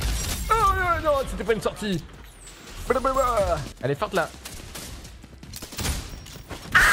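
At 5.64 s a repeated buffer occurs: a tiny 1.33 ms block plays three extra times, heard as a brief click, which fits a 64-sample buffer.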